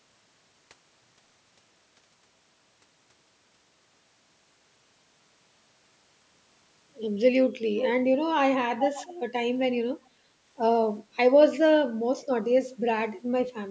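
Speech with two short bursts of echo leak, from 7.81 to 7.86 s and from 8.83 to 9.13 s. In each, a distinct copy of the speech returns about 387 ms late, only a little quieter than the original. This is likely a far-end loudspeaker whose echo canceller let part of the signal back through. A separate, delayed repeat like this sets it apart from room reverberation, which smears into a continuous tail. The call's microphone processing is audible in the band limit at 8 kHz.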